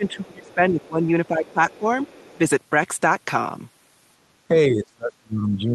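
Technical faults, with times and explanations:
0.00–1.86 s and 4.48–5.74 s, speech suppressed in double talk: with both ends talking at once, the echo canceller likely could not separate the near talker from loudspeaker echo and turned both down. The speech dips and breaks up, by about 25 dB early on (roughly 1.5 s affected) and about 30 dB at the end.
0.46–0.54 s and 1.26–2.38 s, other side's voice leaking through: the echo canceller likely failed to remove all of the far-end voice that the talker's loudspeaker put back into the microphone. A faint second voice, about 30 dB below the speech, comes through, first as a brief scrap and then for just over a second.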